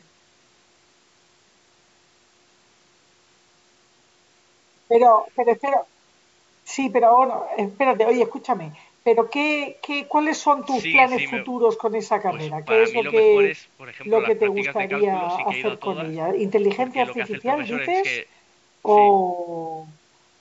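Nothing goes wrong anywhere in this speech; it has simply passed through a call's microphone processing, which trims the lowest bass, exactly as that path normally does.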